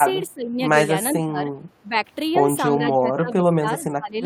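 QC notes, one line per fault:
0.29–0.59 s, 1.13–1.43 s, 1.82–1.96 s and 2.76 s to the end: speech suppressed in double talk. The speech dips by roughly 10 to 20 dB in each stretch, likely because an echo canceller, unable to separate this talker from simultaneous far-end echo, attenuated both.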